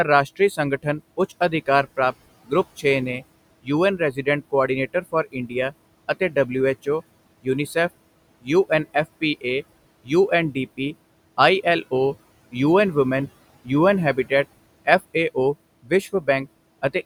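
A speech recording with room noise sitting about 19 dB below the voice, run through a noise suppressor that pulls the steady background down by about 21 dB. Noise suppressor artifacts run the whole clip: the residual noise dips in the pauses and swells back under speech. The same processing also causes speech cut by the noise suppressor, misclassifying quiet speech as noise and attenuating it by up to about 20 dB. This happens from 0.36 to 6.87 s (around a second in total), 8.41 to 9.44 s, 10.04 to 11.92 s, and 13.64 to 16.95 s (about half a second), where soft consonants and word endings sound swallowed.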